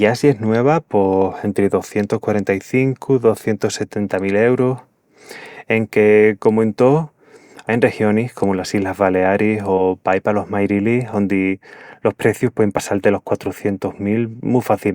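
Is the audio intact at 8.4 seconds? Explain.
No. At 8.43 s a compressed frame is skipped: the fault lasts only about 10 ms, but the audio jumps ahead by roughly one frame, about 20 ms of material never played. The spacing fits a codec working in 20 ms frames, with one frame either missing from the stream or rejected by the decoder as damaged. The splice is heard as a brief jump in the speech where that material is left out.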